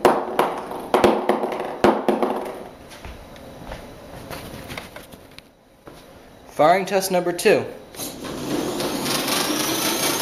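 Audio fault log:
No faults detected anywhere in the clip.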